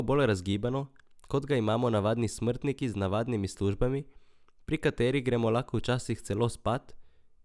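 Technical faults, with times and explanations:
No technical faults are audible in this speech.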